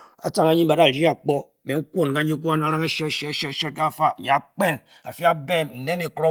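From start to finish the speech carries channels drifting apart: the two sides run on clocks a couple of hundred parts per million apart, so the delay between them creeps to around a millisecond and a half. Summed, this gives a slow sweeping flange, unlike the fixed hollow colouring of a constant offset, heard over light Opus coding.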